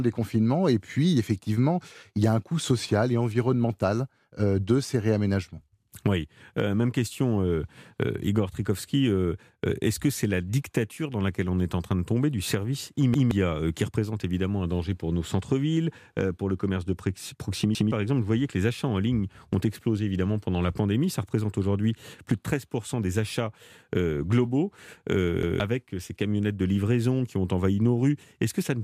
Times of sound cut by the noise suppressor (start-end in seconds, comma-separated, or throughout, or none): none